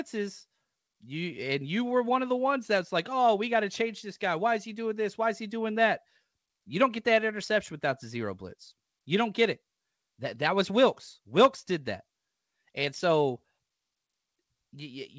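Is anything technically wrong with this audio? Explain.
No, the speech came through a G.722 call path that is working as it should, and that codec's band limit means nothing is heard above 8 kHz.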